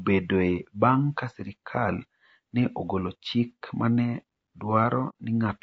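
Speech with a rough, grainy texture throughout, noise filling the gaps between voice harmonics. This is likely low-delay AAC compression, whose coarse coding at low bitrates adds noise between pitch harmonics, and the damage fits a bitrate near 32 kbps. From 5.09 to 5.13 s there is AAC frame loss with muting, consistent with a couple of lost frames. The sound fades softly out and back in, unlike a hard-edged dropout.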